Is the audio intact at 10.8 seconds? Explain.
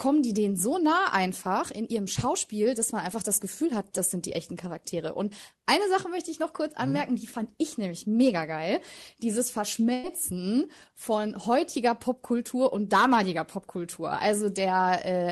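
Yes, the speech at 10.8 seconds is intact, with nothing beyond the ordinary character of the call path it travelled through, whose band reaches up to about 12 kHz.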